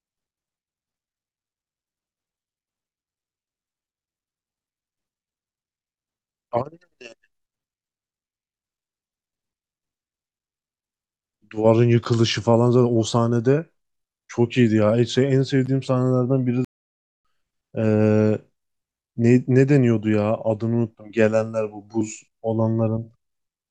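At 16.65 s the speech cuts off mid-flow and goes silent until 17.25 s, a playback stall of about 600 ms, likely from the player running short of data. The waveform shows a flat gap and the spectrogram a blank vertical band.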